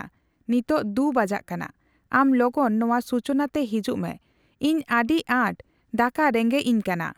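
Speech recording; no technical faults can be heard anywhere.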